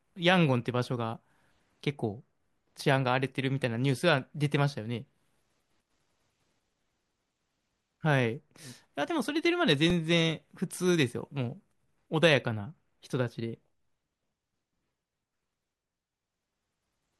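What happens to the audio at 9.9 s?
A repeated buffer occurs at 9.90 s: fresh audio arrived late, so the same chunk of about 2.7 ms, which fits a 128-sample buffer, played three times in a row with hard joins. At that size it registers as a brief click or buzz, with essentially nothing lost.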